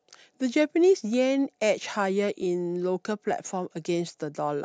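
No technical faults can be heard anywhere here.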